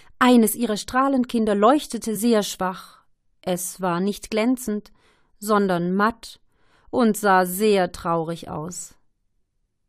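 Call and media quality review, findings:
Damaged data in compressed stream, 2.15 s: very brief blip. Decoder misreads corrupted frame, loses sync, resyncs. Spectrogram shows thin broadband vertical streak; waveform shows momentary discontinuity.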